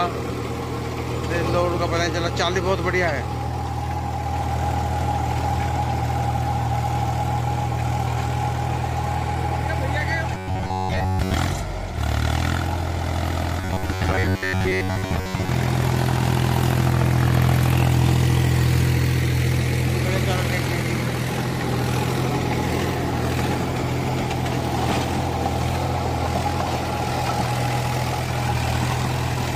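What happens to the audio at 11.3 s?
At 11.3 s the sound is near the end of a stretch of robotic sound from repeated short buffers, running from 10.35 to 11.34 s. It becomes a rigid, metallic buzz fixed at about 94 Hz. The likely cause is late-arriving audio, with a roughly 11 ms chunk repeated for most of that span.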